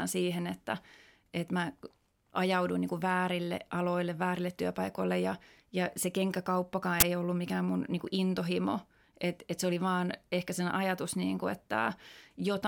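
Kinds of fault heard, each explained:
Uninitialised buffer, 7.00 to 7.02 s: a playback block went out before any audio was written into it, so stale memory contents were played as samples, giving a loud burst of digital noise about 21 ms long, which fits a 1024-sample buffer, between "ja ja se kenkäkauppakaan" and "ei ollut mikään mun".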